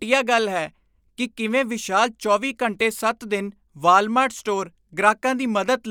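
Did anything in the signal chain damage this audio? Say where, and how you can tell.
No, no damage heard.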